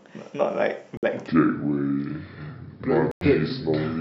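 At 0.97 s the wireless link to the headphones likely failed to deliver audio packets in time, and the receiver dropped them. The result is a Bluetooth dropout: the speech cuts to silence with hard edges until 1.06 s. When it returns it has moved on, skipping ahead by about 56 ms of audio, which fits a few lost packets, rather than picking up where it stopped.

From 1.28 s to the end, a section at the wrong speed follows, likely from the playback being clocked against the wrong rate. The audio runs at 0.704 times its proper speed. Pitch drops by roughly seven semitones along with the tempo, so the voice turns suddenly deep, slow and drawn out, and stays that way.

Inside that slowed stretch, a second Bluetooth dropout likely comes from another run of packets missing the headphones' deadline. The sound goes abruptly silent from 3.11 s to 3.26 s. It then resumes about 98 ms further on, which fits a longer burst of lost packets than the first gap, so a larger piece of the speech is missing.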